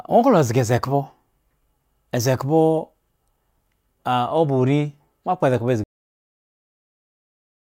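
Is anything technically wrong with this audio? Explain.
Yes. Cut-off end at 5.84 s: the final buffers were never written, so the speech stops mid-sound and drops straight to digital silence, with no natural decay.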